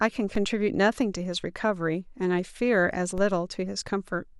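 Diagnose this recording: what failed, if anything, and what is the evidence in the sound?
Two DC steps are audible in this speech clip, at 0.35 s and 3.18 s, each heard as a brief low thump while the speech carries on unchanged. The waveform's zero line jumps by about -25 dBFS and then drifts back, consistent with a high-pass of roughly 2 Hz in the chain bleeding the offset away. This points to the converter or analogue input stage: an offset recalibration or a biased source being switched in.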